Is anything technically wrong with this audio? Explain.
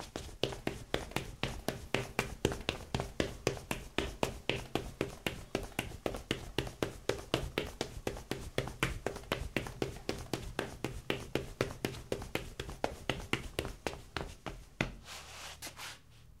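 Yes. From 7.37 to 7.90 s there is a drift correction step. The sound runs 5.7% fast and rises about 95 cents, nearly a semitone. Then it snaps back. Likely, clock-matching software jumped the playback rate to rebalance its buffer.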